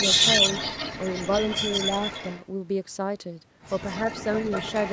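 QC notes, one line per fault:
0.00–2.45 s and 3.83–4.92 s, echo leak: a delayed second copy of the speech trails the original, 178 ms behind in the first stretch, where it is about as loud as the direct sound, and 190 ms behind near the end, where it sits well below it. The likely cause is a far end playing the call on a loudspeaker whose echo canceller failed to remove what its microphone picked up, so that audio was sent back.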